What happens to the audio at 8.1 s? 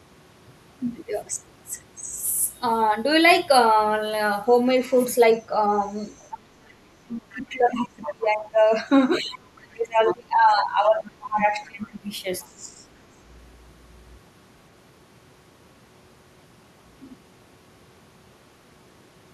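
At 8.1 s, two things overlap. The talker's speech is held down from 7.06 s to 12.81 s, dipping by up to around 20 dB and losing level in stretches. This is likely speech suppressed in double talk: with both sides speaking, the echo canceller could not separate the near voice from the loudspeaker echo and attenuated everything. Unlike a network dropout, the voice is turned down and gapped rather than replaced by silence or robotic filler.

Inside that span, from 8.06 s to 8.14 s, a brief scrap of a second voice comes through for about 80 ms, roughly 20 dB below the talker. This is the other side's voice leaking through, likely residual loudspeaker echo that the canceller failed to remove from the microphone. It is a separate, faint voice rather than a repeat of the talker, which distinguishes it from a talker's own echo or from reverberation.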